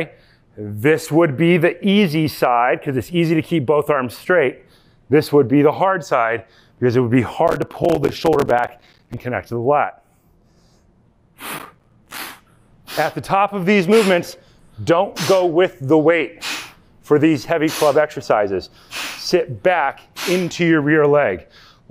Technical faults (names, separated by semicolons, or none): processor overload crackle